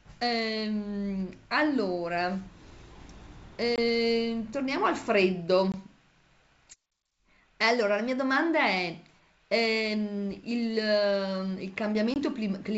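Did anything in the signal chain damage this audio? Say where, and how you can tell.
Yes. The damage happened in the network stage, as packet loss on an ADPCM call. Three short, hard-edged gaps fall at 3.76–3.79 s, 5.72–5.75 s and 12.14–12.17 s, each about 20 ms of missing audio, or roughly one packet. Silence replaced each lost packet, so the receiving ADPCM decoder's predictor and step size drifted away from the sender's. That produces the abrupt hole and slightly distorted speech as it resumes over the G.722 wideband path.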